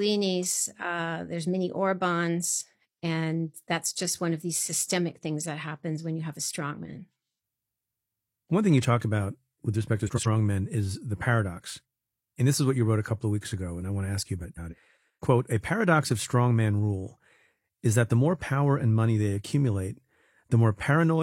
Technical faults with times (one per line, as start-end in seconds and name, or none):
10.07-10.27 frames out of order
14.43-14.74 frames out of order